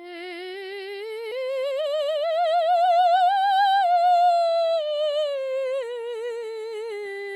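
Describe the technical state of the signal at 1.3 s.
A skip ahead occurs at 1.31 to 1.33 s in this music. Roughly 0.7 s of the stream never reaches playback. It was either lost in transit or discarded when a jitter buffer overfilled and had to catch up while later audio was already queued. Nothing is inserted to cover the cut, so the music before the jump is spliced almost directly onto material from about 0.7 s later. It sounds like an abrupt lurch forward in the music rather than a silence, and the playback delay shrinks by a similar amount.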